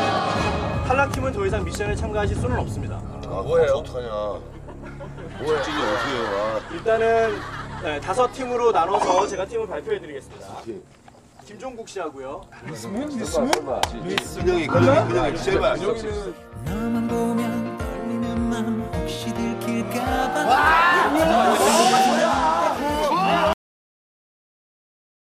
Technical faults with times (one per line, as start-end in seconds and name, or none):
23.53-25.38 cut-off end